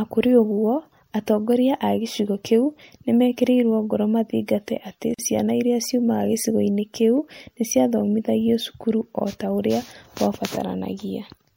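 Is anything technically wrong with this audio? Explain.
Yes. There is a gap at a join of encoded pieces at 5.14 s, just after "meekĩrirũo ngoro mathingate atĩ" and before "ciana iria". The speech drops into silence for about 44 ms and then carries on where it stopped. Its edges are smeared by the codec. The pieces were encoded separately and joined untrimmed. So the encoder's start delay and the padding of the last frame both stayed in. The joins recur every 6 s.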